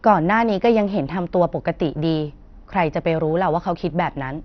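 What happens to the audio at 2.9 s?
At 2.9 s, as throughout the speech, likely MP2 compression at a starved bitrate near 48 kbps drops upper sub-bands, leaving nothing above 6.2 kHz: dull, gurgling and granular.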